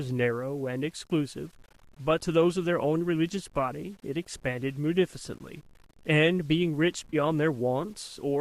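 Low bit depth without dither runs through the whole recording: a grainy distortion rides along with the speech, roughly 35 dB below it, and turns gritty in quiet passages. This is likely from rounding to very few bits without dither, which fits 8-bit rounding.

AAC frame loss with concealment occurs from 7.10 to 7.15 s. About 30 ms of audio drops out, which fits three lost frames of the low-delay AAC stream. The decoder patches the gap from the last good spectrum, so the sound smears briefly into a noisy, phasey blur.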